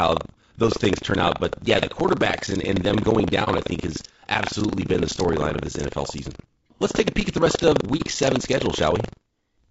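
Across the whole clip runs buffer tearing: a steady robotic rattle at about 23.4 Hz that rides on the speech and falls silent in the pauses. The program filling the playback ring buffer and the hardware draining it have drifted into the same stretch, so each period mixes fresh audio with a small slice left over from about a tenth of a second earlier. The rate fits a 2048-sample buffer. A waveform shows hard steps every 43 ms or so, and a spectrogram shows thin vertical lines at that spacing, only where there is signal.

Also throughout, the voice is rough and grainy, with a hiss filling the gaps between harmonics and a thin, synthetic-sounding top band. This is most likely low-delay AAC compression, the AAC-ELD type used for calls. Its short frames cannot separate voice harmonics cleanly, and at a low bitrate, which fits around 32 kbps, the coder spreads noise where the harmonics should stand apart. 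On a spectrogram the harmonic stripes look smeared and the spaces between them fill with speckle, while the upper band looks patchy or flattened.

At 3.44 to 3.48 s, between "and and them going" and "I think has absolutely", the first AAC frame loss with muting occurs. A 30 ms piece of audio, which fits a single lost frame, was zeroed by the decoder. The overlapping windows fade the sound out and back in, so it is heard as a brief dip. The waveform envelope dips smoothly, and the spectrogram shows a narrow, soft-edged weakening.

The same AAC frame loss with muting recurs at 7.97 to 8.02 s, right after "at the rest of". Again about 30 ms drops out as a gentle gap rather than a sharp cut, because each edge is faded across the overlapping window instead of being chopped. It looks the same as the first one, with a smooth dip in the waveform and a short, soft-edged weakening on the spectrogram.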